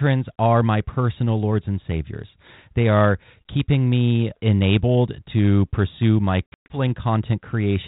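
From 6.47 to 6.77 s the speech breaks into hard-edged silent gaps, the longest about 120 ms, then resumes with brief, slight distortion. This is packet loss on an ADPCM call: around ten packets vanished, leaving the G.726 decoder's adaptive predictor and step size out of step with the sender until they resynchronised.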